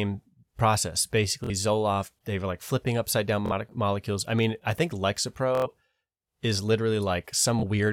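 Bluetooth stutter occurs at 1.44 to 1.50 s, 3.46 to 3.53 s, 5.55 to 5.67 s and 7.60 to 7.64 s. In each case the wireless link dropped or delayed audio packets, so the receiver looped its last buffered slice until data resumed. The speech buzzes briefly, then continues further on, skipping the missing material: about 46 ms at the first two, about 93 ms at 5.55 s, and about 23 ms at 7.60 s, which fits losses of one to four frames.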